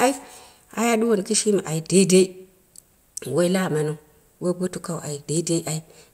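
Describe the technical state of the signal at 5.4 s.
At 5.37 s there's a single sharp click, a thin vertical line in the spectrum, most likely from dropped samples: a handful go missing, well under a millisecond, so the speech waveform jumps abruptly to a later value without losing any audible sound.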